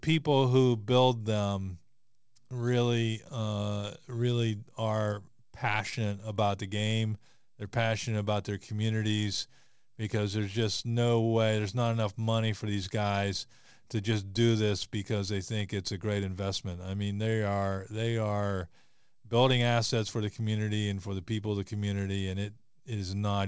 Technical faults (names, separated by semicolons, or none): none